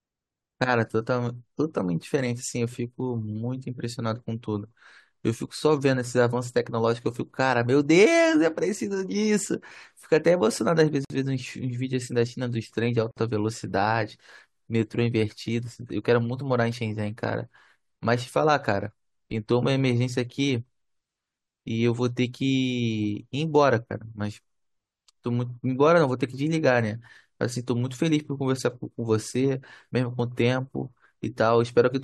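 Separately encoded pieces were joined without trimming each run's start-up delay and end padding. This leaves a gap at a join of encoded pieces at 11.05 s and 13.11 s: gaps of 54 ms and 56 ms with smeared edges, before the speech resumes where it stopped.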